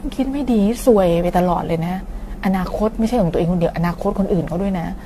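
Throughout, the speech was likely re-encoded about seven times with AAC, compounding quantisation damage. This generation loss sounds swirly, hollow and smeared, blurs attacks, and leaves nothing above 14 kHz.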